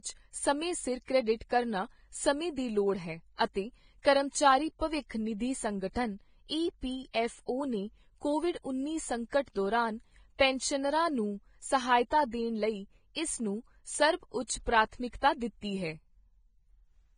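From the first second to the last, the speech has that hissy, grainy top end of heavy Vorbis compression. Nothing comes through above 9.7 kHz, and the treble that's left has turned into a rough noise wash rather than real detail, so tones sound roughened. That degree of damage fits a low bitrate somewhere around 20 kbps, which is likely the cause. The codec is spending so few bits that it throws away the high band and quantises the rest into noise of roughly the same energy.

Two pre-echo spots stand out. The first runs from 4.02 to 4.05 s, right after "ਦੀ ਲੋੜ ਹੈ ਅਤੇ" and just before "ਕਰਮਚਾਰੀ ਭਵਿੱਖ ਨਿਧੀ ਸੰਗਠਨ". You get a 26 ms smear of hiss ahead of the onset. The second is at 9.29 to 9.33 s, between "ਓ ਨੇ ਕੋਵਿਡ ਉੱਨੀ" and "ਦੌਰਾਨ ਪੈਨਸ਼ਨਰਾਂ ਨੂੰ ਸਹਾਇਤਾ", spreading about 32 ms. In both cases a sharp attack landed late in a transform block, and the noise budgeted for the loud part leaked into the quiet just before it. 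That leaves the attacks sounding soft and blurred.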